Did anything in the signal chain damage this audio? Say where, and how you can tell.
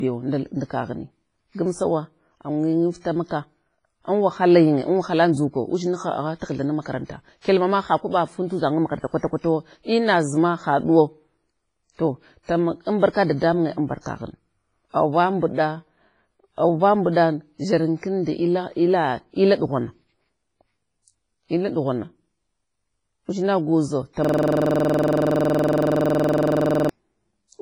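Yes, two stages left marks. The whole speech clip carries WMA compression, heavy damage, likely from a low-bitrate encode around 24 kbps. Everything above 10.5 kHz is gone, and what's left has that ringing, washy quality with hiss that swells and shrinks with the voice. That's a transform codec throwing away quantisation precision across long blocks and zeroing the weaker spectral lines, so the top end and fine detail just vanish.

Same codec, second symptom: there's pre-echo from 7.42 to 7.45 s, between "taghtha nam makaranta" and "kyalma ma ha kwaba". A short hiss arrives about 32 ms before a sharp onset, and the attack itself sounds softened. The onset landed late in a transform block, so the noise budget sized for the loud part got smeared evenly back into the quiet stretch before it.

Then at the driver or buffer stage there's a system hang loop from 24.25 to 26.89 s. One 46.44 ms slice of audio repeats exactly, 57 times, giving a stuttering buzz at about 21.5 Hz. 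The host froze while the sound hardware kept cycling its ring buffer, and that loop length fits a 2048-sample buffer.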